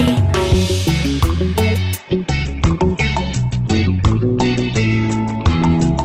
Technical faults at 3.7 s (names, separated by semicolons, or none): adaptive stream at a lower bitrate